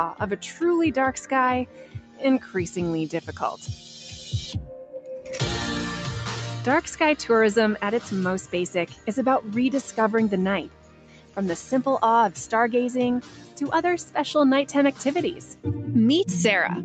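A speech-tuned noise suppressor is left running on this sound from the start, treating sustained tones and tails as noise, so the level swings by around 10 dB and held material pumps and thins while attacks poke through, all above a call path that tops out near 8 kHz. The sound is cut by the noise suppressor at 1.66–2.22 s, 2.40–2.55 s, 8.87–9.07 s, 10.66–11.37 s, 13.22–13.58 s and 15.34–15.66 s, dropping about 9 to 11 dB, so those passages sink and their decays get clipped short.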